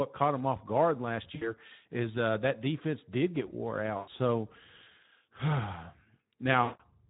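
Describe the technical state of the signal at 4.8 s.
At 4.8 s the speech carries Speex codec damage, present across the whole clip. Too few bits for the excitation leave the voice plainly hoarse and noisy, which fits a setting near 11 kbps. A spectrogram shows blurred, noise-filled harmonics instead of clean striations.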